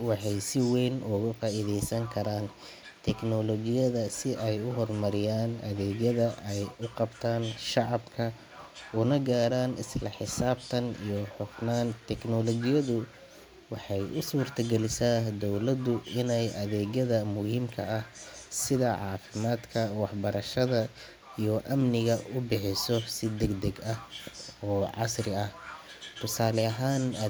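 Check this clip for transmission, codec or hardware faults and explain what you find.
No faults detected.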